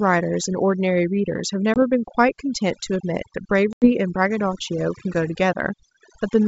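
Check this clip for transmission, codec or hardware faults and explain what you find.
Two faults are present: heavy noise reduction across the whole clip, and two dropouts from lost packets. The wideband coding itself adds little, with only a faint upper-band hiss.

Overdone noise removal, throughout: the noise reducer is set so aggressively that any frequency band close to its noise estimate gets pulled down or muted, and quieter parts of the speech are cut with the noise. The background becomes near-silent with twinkling specks.

Packet loss on an ADPCM call, at 1.74 to 1.80 s and 3.73 to 3.91 s: about 20 ms and then 90 ms of audio vanish into hard-edged silence. Afterwards the decoder's predictor and step size no longer match the sender's, so the speech comes back with brief, slight distortion before settling.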